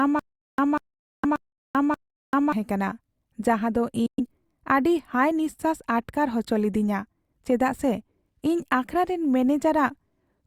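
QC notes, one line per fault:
0.00–2.53 s, stutter with silent gaps: The clip opens mid-stutter. A short burst of about 193 ms of speech plays, cuts to dead digital silence for about 390 ms, then the same burst returns, repeating every 583 ms or so, four times in all. The player or stream likely stalled and replayed its last buffered fragment on each retry before running dry. Whatever speech belonged in those gaps never plays.
1.16–1.25 s and 4.06–4.20 s, Bluetooth dropout: The sound drops to silence, for about 70 ms in the first hole and about 116 ms in the second. It then resumes further along, as though it had kept playing underneath. This is likely wireless packets arriving too late at the headphones and being discarded. The two gaps fit roughly three and five lost frames. The first hole falls inside the stutter run.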